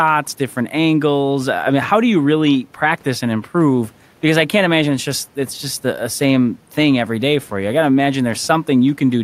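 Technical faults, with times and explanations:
Nothing technical jumps out here; the speech comes across without any faults worth noting.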